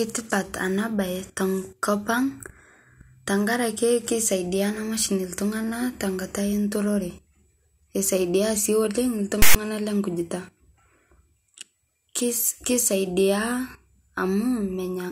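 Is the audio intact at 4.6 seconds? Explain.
Yes, the speech at 4.6 seconds comes through intact, with no dropout, click, distortion or other fault at that moment.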